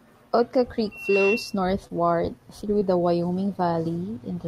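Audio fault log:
0.91 to 1.60 s, loudspeaker feedback squeal: a single tone around 2.7 kHz swells up over roughly a third of a second and then rings on, ending up a few dB louder than the speech itself. What's happening is the mic hearing the loudspeaker it drives, and at that one frequency the loop gain tops one, so the tone keeps feeding itself until it stops at about 1.6 s.
1.87 to 1.91 s and 2.79 to 2.83 s, short concealed packet loss: two brief smears where about 20 ms of the call went missing each time. The receiver patched both holes by stretching out the last bit of sound it had, carrying on its pitch when voiced or using shaped noise otherwise, then crossfaded back to the real audio. The first patch covers the full 20 ms and the second only about 14 ms, so each is heard as a quick smear or wobble rather than a clean gap.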